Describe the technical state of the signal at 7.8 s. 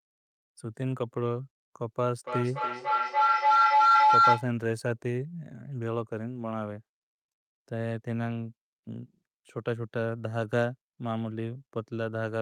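At 7.8 s the speech signal is intact, with no audible fault.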